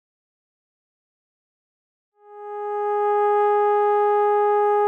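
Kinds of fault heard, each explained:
Nothing stood out as a fault on listening to this music clip; the gentle fade-in around 2 to 3.5 s is smooth, with no click or hard edge.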